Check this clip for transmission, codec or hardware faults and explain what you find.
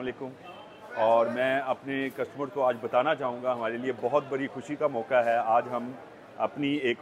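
No transmission, codec or hardware faults can be heard anywhere in the clip.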